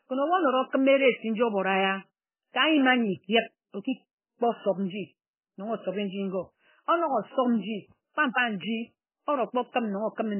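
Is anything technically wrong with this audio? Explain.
Yes. Throughout, the speech sounds watery and swirly with nothing above 3.1 kHz, likely MP3 compression at a very low bitrate, near 9 kbps, stripping treble and flickering weak frequency lines.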